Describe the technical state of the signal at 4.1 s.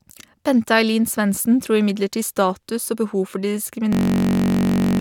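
At 4.1 s the signal is inside a system hang loop that runs from 3.93 s to 4.99 s, starting right after "for de". The playback side stalled while the output hardware kept replaying the same ring buffer, so a 21.33 ms slice, which fits a 1024-sample buffer, repeats about 50 times. At 46.9 repeats per second this sounds like a steady, pitched buzz rather than a stutter, and about a second of real audio never arrives.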